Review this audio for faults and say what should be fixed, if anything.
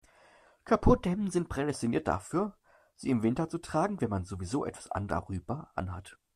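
From 0.90 to 1.70 s the speech runs about 6% fast and rises about a semitone. A drift correction step in clock-matching software is the likely cause.

From 5.10 to 5.14 s there is a brief glitch. Damaged data in the compressed stream made the decoder lose sync.

Fix the clock matching to adjust rate gradually, and check the stream's integrity in transfer and storage.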